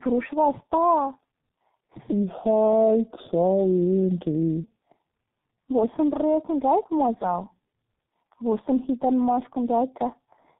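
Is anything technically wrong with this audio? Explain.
Yes. Throughout, tandem speech coding passed the speech through G.729A, then G.711, then G.723.1. Each coder re-encoded the previous coder's damage, leaving the sound rough, muffled and warbly with nothing above 3.8 kHz. That is worse than any one of these codecs alone.

From 2.12 to 4.64 s, a section at the wrong speed plays at 0.726 times normal, likely from a clock mismatch. Pitch drops about five semitones and tempo slows together, unlike a pure pitch shift, which keeps the timing.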